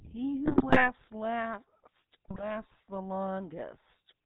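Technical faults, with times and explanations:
Throughout: GSM full-rate codec. The audio passes through a vocal-tract model excited by regularly spaced pulses with sparse excitation, giving a plainly audible buzzy, gravelly roughness. The spectrogram shows an empty band above 4 kHz and coarse, comb-like harmonic structure, consistent with a 13 kbps stream.
0.45–0.92 s and 2.28–2.50 s: GSM bit errors. Corrupted filter, pitch and gain values make the decoder output squawks, pops and gargling for roughly a few percent of bits. On the waveform, level spikes jump out per frame; the spectrogram shows smeared, misplaced formant bands.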